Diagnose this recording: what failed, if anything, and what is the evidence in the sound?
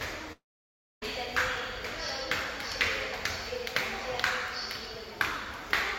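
From 0.32 to 1.03 s the sound gives way to a brief fading buzz, then near-silence, resuming without the missing 0.7 s: likely a long network dropout.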